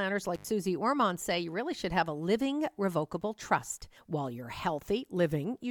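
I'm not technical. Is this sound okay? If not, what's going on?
No. Right near the start, a connection in the recording chain briefly came loose. This is an intermittent contact, like a cable or plug that isn't seated firmly and opens for a split second. From about 0.35 to 0.45 s the speech drops out for roughly 84 milliseconds, with a crackle as the contact breaks and again as it reconnects, and faint hiss in the gap.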